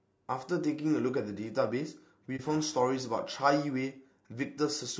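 Throughout the speech there is plainly audible codec damage. The texture points to low-delay AAC compression, likely AAC-ELD at a low rate, around 32 kbps. This codec uses very short frames. Short frames resolve the pitch harmonics poorly, and the bits run thin. The voice turns rough and grainy. Noise fills the gaps between harmonics. The top band sounds dulled and somewhat synthetic.

From 2.36 to 2.40 s there is AAC frame loss with muting. This fits a single lost frame. The decoder filled that frame's spectrum with zeros. The overlapping windows fade the sound out and back in across the gap, so it becomes a brief dip of about 40 ms. The speech briefly drops away, then returns.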